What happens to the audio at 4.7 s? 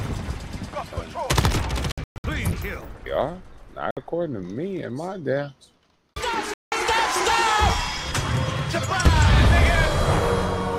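Nothing goes wrong at 4.7 s; the audio plays through that moment intact, with no dropout, click or other disturbance.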